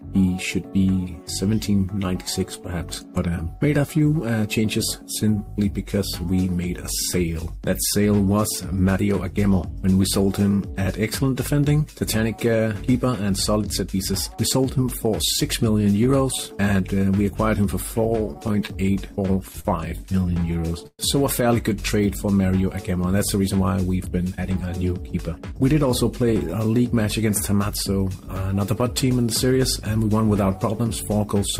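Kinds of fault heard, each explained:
Repeated stalls (stutter): late packets emptied the buffer near 18.1–19.7 s and 20.1–21.0 s, so the last sound was held, up to 123 ms, showing as smeared frozen spectrogram bands.
Jitter buffer speed-up: from 24.06 to 26.33 s the receiver trimmed about 200 ms, running 7% faster at unchanged pitch; events crowd together while harmonic spacing stays fixed.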